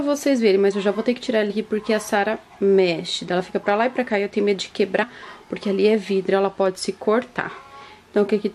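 At 1.49 s there is a brief burst of damaged data in the compressed stream. It lasts about 14 milliseconds and is heard as a short chirp or blip. A second, similar event runs from 5.02 to 5.04 s. In both places the coded bytes are wrong. The decoder cannot read those frames correctly and loses its place. It then hunts for the next valid frame header. That lost sync is what causes the glitch you hear.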